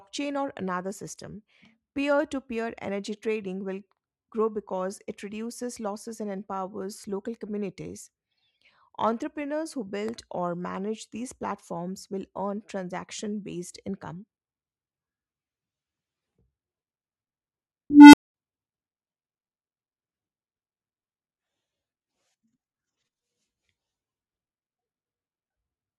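From 17.90 to 18.34 s an unstable filter runs away: a tone around 300 Hz swells over 0.23 s into a clipped squeal, then overflows into 0.21 s of silence. The waveform balloons until it clips, and the spectrogram shows a bright low band, then a blank gap.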